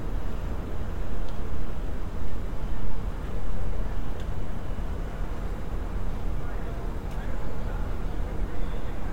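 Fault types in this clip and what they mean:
lost LE Audio frames: Two brief noisy smudges break up the sound, about 7.5 ms at 0.62 s and 15 ms at 6.38 s, fitting one and two dropped Bluetooth LC3 frames, which the decoder filled by replaying the previous spectrum with randomised signs.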